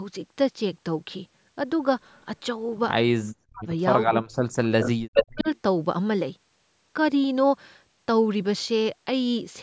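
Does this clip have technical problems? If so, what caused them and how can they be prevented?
Yes, two kinds of trouble show up in this speech.

Echo leak: a delayed copy of the talker comes back at 2.11 to 2.23 s, barely audible and trailing by 315 ms, then at 4.64 to 4.9 s and 5.15 to 5.58 s, trailing by 410 ms. By that last stretch the echo is as loud as the speech itself. The likely cause is a speakerphone whose echo canceller didn't fully remove what its mic picked up. Using a headset on that end would stop it.

Speech suppressed in double talk: the talker drops out sharply, down to near silence, at 3.24 to 3.66 s, 4.12 to 4.46 s and 4.79 to 5.47 s, with the last dip overlapping the loud echo. That's likely the echo canceller hearing both sides at once, failing to tell its own talker from the loudspeaker echo, and turning everything down. Headsets, or people not talking over each other, would keep the canceller from clamping down.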